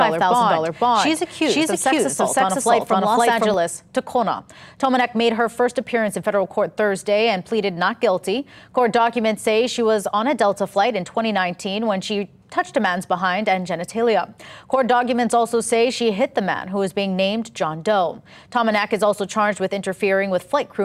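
From the start until 3.54 s, a doubled audio track is heard: a second full-band copy trails the sound by about half a second at roughly equal level, with no decay or room colour, then stops abruptly, likely from a slower second capture path mixed in.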